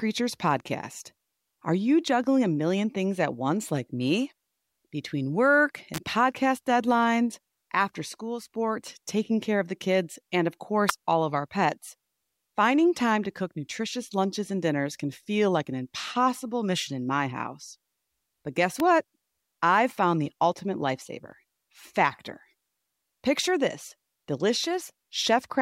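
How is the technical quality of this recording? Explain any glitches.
Three sharp snaps cut across the speech, sitting on top of it rather than replacing it. The first runs from 5.94 to 5.98 s; the other two are brief, at 10.89 s and 18.80 s. The one at 10.89 s is loudest, peaking around -5 dBFS against about -10 dBFS for the others. These are most likely electrical switching spikes: a nearby switch, motor or static discharge arcing and inducing a burst of energy into the audio line.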